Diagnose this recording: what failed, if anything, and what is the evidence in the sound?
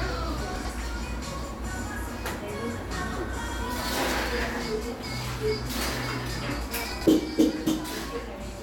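The buffer stage delivered chunks out of order three times, at 0.56–0.70 s, 3.39–3.53 s and 6.92–7.06 s. Each time, one block of about 46 ms played two blocks late, giving a brief jumbled stretch with three hard joins.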